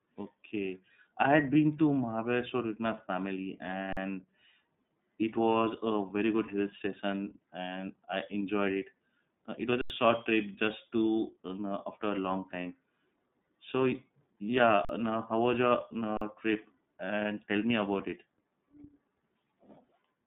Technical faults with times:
0.00-20.27 iLBC codec
3.93-3.97 underrun with held sample
9.81-9.90 underrun with held sample
14.85-14.89 underrun with held sample
16.17-16.21 underrun with held sample

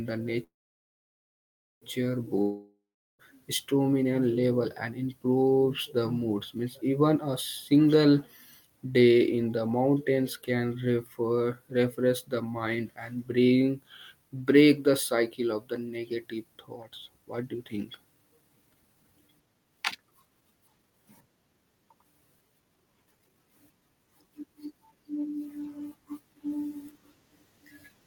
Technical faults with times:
0.43-1.85 call audio freeze
2.42-3.22 long network dropout
15.52-20.99 jitter buffer speed-up
22.50-24.97 jitter buffer speed-up

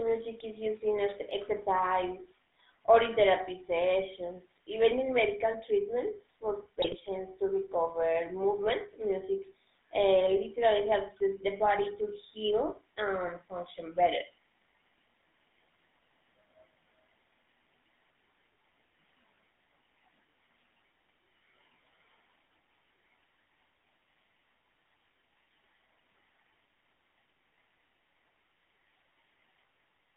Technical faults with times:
0.00-30.16 GSM full-rate codec
6.82-6.95 GSM bit errors

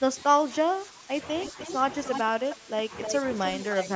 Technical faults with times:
0.00-1.14 speech suppressed in double talk
1.43-1.77 echo leak
1.52-1.59 speech suppressed in double talk
2.05-2.20 echo leak
2.24-2.93 speech suppressed in double talk
2.50-2.55 echo leak
3.03-3.15 echo leak
3.44-3.88 echo leak

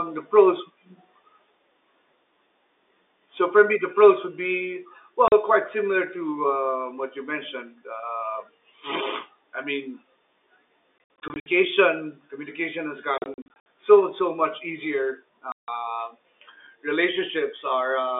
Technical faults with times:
5.28-5.32 packet loss filled with silence
10.98-11.46 packet loss filled with silence
13.18-13.66 packet loss filled with silence
15.52-15.68 packet loss filled with silence

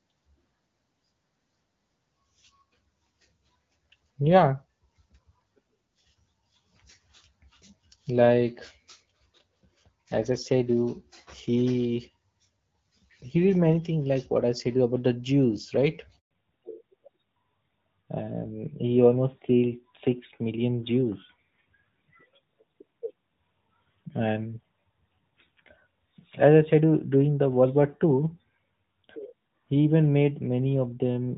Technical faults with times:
16.19-16.31 handover gap
16.31-31.38 fallback to narrowband

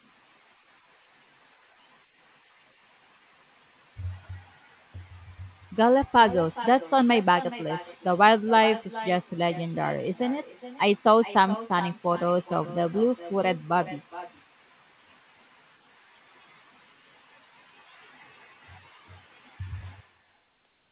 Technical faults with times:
0.00-20.92 echo with no canceller

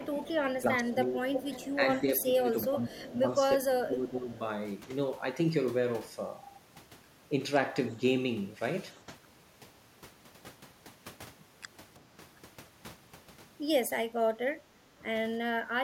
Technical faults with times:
0.00-4.30 speech suppressed in double talk
0.29-1.73 echo leak
2.93-3.19 echo leak
3.78-3.87 echo leak
14.43-15.58 speech suppressed in double talk

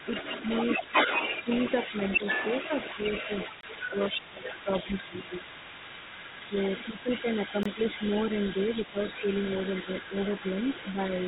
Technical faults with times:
0.00-11.28 other side's voice leaking through
1.91-2.21 speech suppressed in double talk
3.61-3.63 gap between chunks
3.89-5.45 speech suppressed in double talk
6.48-8.02 speech suppressed in double talk
7.63-7.66 gap between chunks
8.92-9.24 speech suppressed in double talk
9.84-10.44 speech suppressed in double talk
10.93-10.98 speech suppressed in double talk

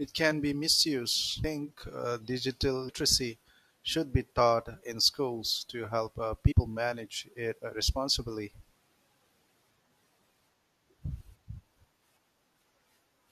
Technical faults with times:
1.43 damaged data in a compressed stream
2.88 damaged data in a compressed stream
6.51 damaged data in a compressed stream
8.75 damaged data in a compressed stream
11.05 damaged data in a compressed stream

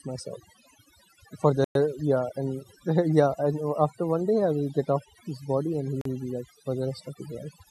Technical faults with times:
0.00-7.70 overdone noise removal
1.64-1.75 Bluetooth stall
6.01-6.05 Bluetooth stall

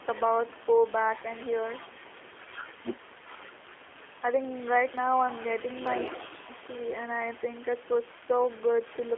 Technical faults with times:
0.00-9.18 G.729 codec

